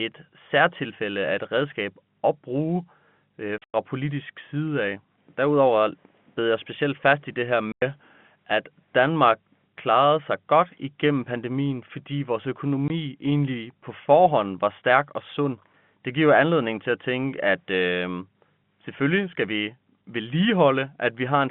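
Packet loss filled with silence left hard-edged holes in the telephone-band speech at 3.58 s (140 ms, after "redskab at bruge øh"), 7.72 s (100 ms) and 12.88 s (20 ms), all fitting 20 ms packets.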